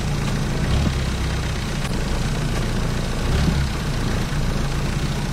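A recording of sounds with damaged data in a compressed stream at 0.83–0.89, 1.86–1.91 and 4.20–4.25 s: corrupted frames make the decoder lose sync, leaving brief disruptions that show as short vertical breaks in the spectrogram and waveform.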